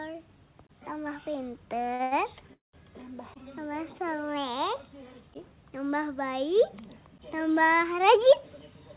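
Twice in quick succession a packet arrived late and the jitter buffer emptied, at 1.94 to 2.01 s and again at 2.03 to 2.13 s. Each time the receiver held the last sound for about 52 ms and then 81 ms, so it lingers with a faint buzz or dip and resumes with nothing lost. These are short stalls from a late packet, heard through the narrow band of the call codec, which has nothing above 4 kHz.

From 2.53 to 2.75 s there is a call audio freeze, likely from packets held up in transit so the buffer ran dry for about 200 ms. The last sound is stretched briefly, then about 150 ms of that stretch falls to silence before the audio picks up where it stopped.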